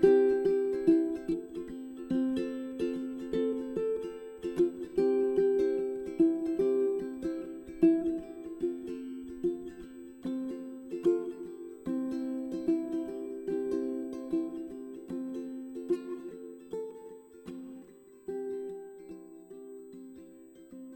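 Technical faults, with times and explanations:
Throughout, USB whine: a fixed-pitch tone sits under the audio at 8 kHz, with its strongest component at the 16 kHz harmonic, roughly 35 dB below the signal. It comes from current drawn in 125-microsecond USB microframes leaking in through power or ground. On a spectrogram it appears as thin, unbroken horizontal lines at 8 kHz and 16 kHz running the full length, independent of the programme. The waveform shows no visible trace at this level.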